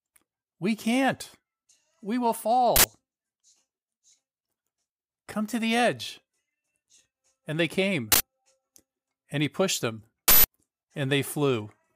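At 2.76 s a short, loud burst of digital noise cuts in for 80 ms, the sign of an uninitialised buffer: a block went to the output before any audio had been written into it, so stale memory contents were played as samples. The same 80 ms burst returns at 8.12 s. At 10.28 s it lasts 160 ms, twice as long, from a single larger unfilled block of 160 ms.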